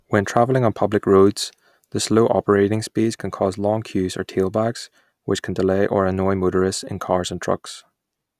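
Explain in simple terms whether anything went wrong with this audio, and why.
Listening to the recording, nothing stood out as having gone wrong with the speech at any point.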